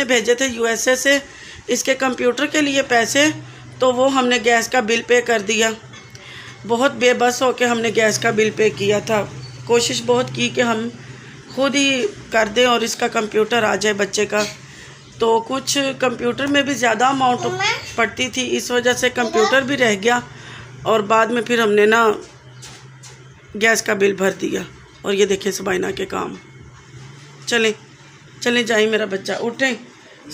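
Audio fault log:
No fault is found in this clip.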